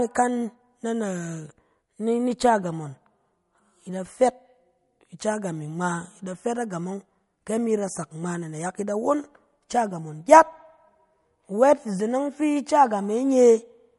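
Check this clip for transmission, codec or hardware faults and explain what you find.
There's one fault, and it runs through the whole speech clip: plainly audible damage of the kind MP3 compression leaves, likely from an encoder working at a low bitrate, which fits something around 48 kbps. Starved of bits, the encoder cuts the treble off at a fixed point, so nothing remains above about 11.2 kHz and the top end sounds dull. It also drops quieter frequency detail that flickers in and out between frames, giving the sound a watery, unsettled texture.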